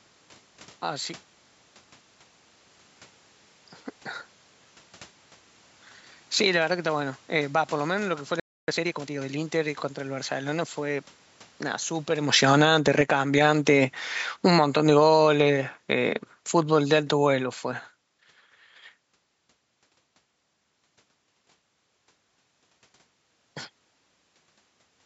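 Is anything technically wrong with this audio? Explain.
Yes, there are four separate problems in this speech. At 8.40 s there's a playback stall: the sound cuts out for about 280 ms, likely because the player ran dry or its thread got blocked. From 8.68 to 9.24 s comes a time-compressed catch-up: the player trims its backlog by splicing out small chunks, so the speech runs about 1.5 times faster at normal pitch. Between 10.34 and 17.92 s the automatic gain is falling: the AGC judged the input too loud or its background noise too strong and eased its gain down by about 16 dB, so the voice and background sink together. That's separate from the talker shifting position around 12 s. Then from 20.43 s to the end, automatic gain rising kicks in: the AGC heard the input as too quiet and lifted it about 5 dB, so voice and room noise swell together gradually.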